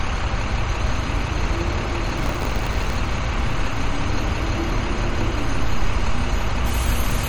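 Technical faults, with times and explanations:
Throughout, MP3 compression: the encoder is likely short of bits, which fits a low bitrate around 48 kbps. It switches weak frequency lines on and off between frames, giving a plainly audible watery, swirly texture with smeared attacks.
2.17 to 2.97 s, buffer tearing: the software writing the ring buffer and the hardware reading it slip out of step, so a small slice of each buffer replays audio from about 30 ms earlier, bounded by hard joins. That repeats as a rough buzz at 93.8 Hz, which fits a 512-sample buffer.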